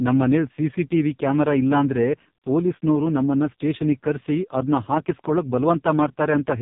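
From start to finish the speech passes through an AMR narrowband mobile codec, with heavy damage pointing to its lowest mode, near 4.75 kbps. Few excitation pulses per frame make voices buzzy and synthetic. A spectrogram shows everything above 3.8 kHz cut flat.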